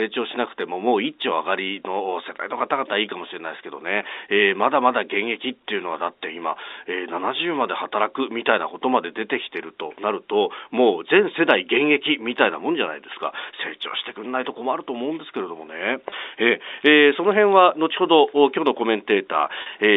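At 16.10 to 16.12 s and again at 19.62 to 19.66 s, packet loss with pitch repetition: about 20 ms, then 40 ms, of audio went missing (consistent with one and then two lost packets). The receiver bridged each gap by repeating the last pitch period, heard as a brief buzzy, held tone in the telephone-band speech.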